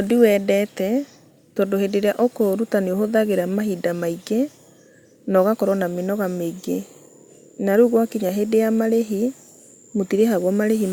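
No faults can be heard anywhere in this speech recording.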